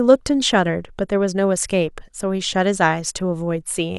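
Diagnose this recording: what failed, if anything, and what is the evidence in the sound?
Overlap between stream segments at the network stage: a tiny skip at 2.19 s where roughly 16 ms of speech was cut at a 2 s segment boundary, so the waveform jumps.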